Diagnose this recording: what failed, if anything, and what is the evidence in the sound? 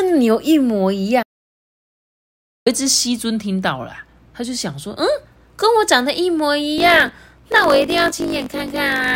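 The speech cuts out completely at 1.23 s and returns at 2.66 s, roughly 1.4 s of dead digital silence with no room tone underneath. That's an audio dropout to silence at the input stage, likely a device or link dropping while the recorder kept writing zeros.

From 6.76 s to the end there's a 50 Hz buzz, and the speech runs 1.07 times fast at about normal pitch. That's a block size mismatch (truncated) in the driver or buffer stage. The writing side fits 1024-sample blocks, each block's tail gets chopped off on reading, and that repeated cut is the buzz.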